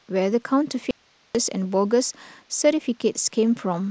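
From 0.91 to 1.35 s the speech cuts abruptly to faint hiss far below its level: an audio dropout to a faint residue, likely signal lost while the path stayed live.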